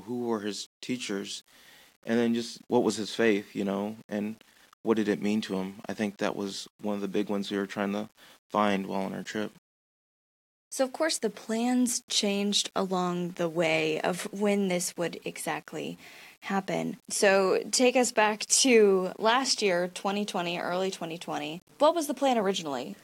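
Speech with grainy distortion running through the whole clip that rises and falls with the voice, the sign of low bit depth without dither, likely 8-bit rounding. The error sits roughly 35 dB below the signal. A spectrogram shows broadband grit tracking each syllable and vanishing in pauses, and the waveform shows stepped levels in quiet passages.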